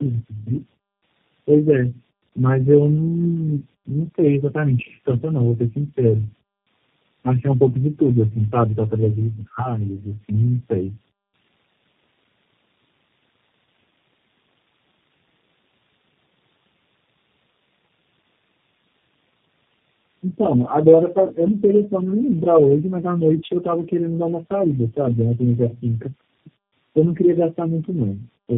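Throughout the speech, tandem speech coding is audible. The sound fits a call that passed through about four low-rate speech codecs in a row, with G.711 links between them. Each coder reworked the last one's output. Nothing remains above 3.5 kHz. The speech sounds muffled, rough and warbly.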